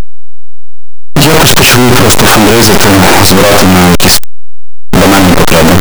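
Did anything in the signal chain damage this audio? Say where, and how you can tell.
Yes. The damage sits at sample-format conversion. Throughout, the speech is harsh and loud, and quiet stretches hit as hard as loud ones. That is likely signed and unsigned mixed up on 8-bit samples. The flipped top bit turns each zero crossing into a full-range jump.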